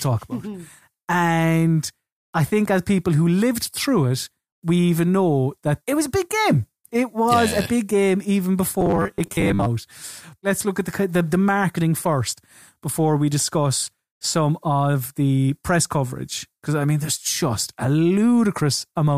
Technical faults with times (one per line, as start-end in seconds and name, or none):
8.81-9.68 robotic sound from repeated short buffers